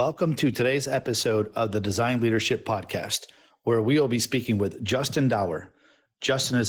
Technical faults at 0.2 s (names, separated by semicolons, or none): Opus voice compression